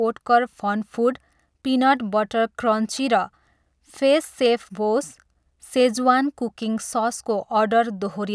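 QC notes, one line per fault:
No technical faults can be heard at any point in the signal.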